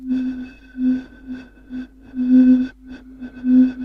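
Nothing in the sound stood out as a problem on listening.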